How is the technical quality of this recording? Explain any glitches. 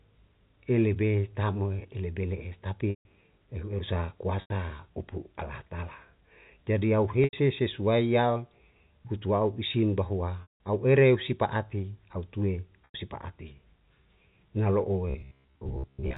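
The recording has two kinds of glitch: five short dropouts bridged by a held tone, and a robotic buzz in the last second. The narrow telephone bandwidth of the G.711 line is audible but is not itself a fault.

Packet loss with pitch repetition occurs at 2.90, 4.41, 7.24, 10.42 and 12.85 s. Each time the sound briefly freezes into a buzzy held tone that fades out before normal audio returns. The gaps last 90 ms at 4.41, 7.24 and 12.85 s, 150 ms at 2.90 s, and 180 ms at 10.42 s. The receiver loops the last pitch period to cover the missing packets and fades it over roughly 50 ms. The longer gaps therefore dip toward silence before a short cross-fade back.

A robotic sound from repeated short buffers runs from 15.10 to 16.17 s. The sound turns into a rigid, metallic buzz at about 66.8 Hz and loosely follows the speech. This is likely caused by new audio arriving too seldom. A segment of about 15 ms repeats for most of this stretch while the real audio is skipped, and that repetition sets the buzz rate.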